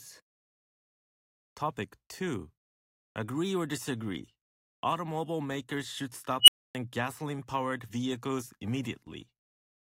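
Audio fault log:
6.41–6.75 s unstable filter: A piercing squeal around 3 kHz rises out of the speech and swells to clipping in about 69 ms, then everything drops to silence for about 270 ms. A recursive filter's coefficients have pushed its feedback past the point of stability, so each pass feeds back more energy than the last and the output grows without bound. Once the arithmetic overflows, the output cuts out until the filter state resets.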